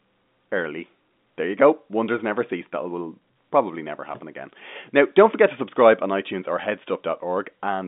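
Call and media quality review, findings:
No faults found; the speech sits in the normal G.711 telephone band, about 200 Hz to 3.6 kHz with nothing above 3.7 kHz, as expected for a 64 kbps A-law call leg.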